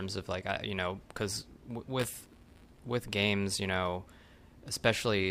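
In this speech clip, the software filling the output ring buffer and the hardware draining it drift out of step between 1.99 and 2.79 s, so their positions cross inside every period. A small slice of each buffer, a few percent, still holds audio from roughly 20 ms earlier, butted against the current signal with hard joins. The result is buffer tearing, a robotic buzz at 172 Hz under the speech, which fits a 256-sample buffer.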